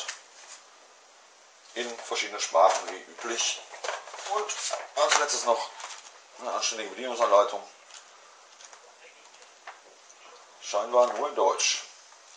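At 3.73 to 3.78 s and again at 11.58 to 11.63 s, a corrupt frame was decoded: damaged bits were played as valid data, putting energy at wrong frequencies. The first error spans a couple of frames, peaking near -35 dBFS; the second, a few frames, is louder, near -20 dBFS.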